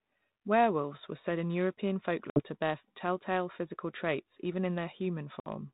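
Speech over a G.726 ADPCM phone link. Packet loss on an ADPCM call cuts 60 ms holes at 2.3 s and 5.4 s. Afterwards the decoder's predictor resynchronises, briefly distorting the sound until about 2.41 s and 5.47 s.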